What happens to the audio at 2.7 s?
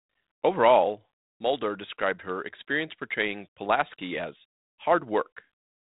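Nothing goes wrong at 2.7 s: the speech passes through intact, carried by the G.726 ADPCM telephone path with its band limit near 3.8 kHz.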